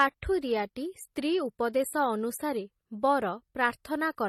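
The speech was likely passed through two lossy codecs in turn, transcoding between lossy codecs, consistent with a low-bitrate MP3 followed by HE-AAC. Throughout, nothing sounds above 14.2 kHz, and the first codec's artefacts are layered with the second codec's own artefacts.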